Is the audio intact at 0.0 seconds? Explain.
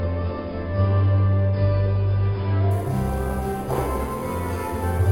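Yes, the audio is intact at 0.0 seconds, with no fault present at that moment.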